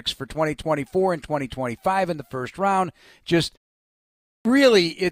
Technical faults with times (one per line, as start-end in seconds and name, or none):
4.24-4.45 clipped start after a pause